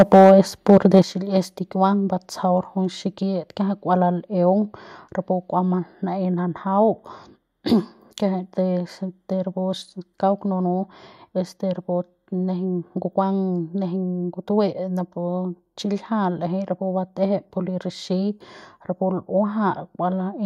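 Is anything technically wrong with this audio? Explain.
Yes. From 0.00 to 0.32 s and 0.69 to 0.99 s, peaks sound flattened and harsh, about 6 dB then about 2 dB over. Likely microphone overload clipping the converter.

At 1.02 s, voice and background drop together by about 9 dB. This is likely the microphone volume stepped down by software reacting to the clipping.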